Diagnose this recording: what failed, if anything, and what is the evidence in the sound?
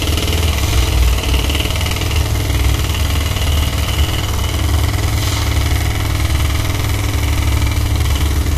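The damage is at the codec stage and runs through the whole clip. The top end stops dead at 14.2 kHz, and the treble below that is hissy and grainy, with transients smeared and tonal parts sounding rough. That points to Vorbis compression, likely at a low setting around 35 kbps. The encoder quantised the high-frequency residue so coarsely over its spectral floor that the fine detail turned into noise of similar energy.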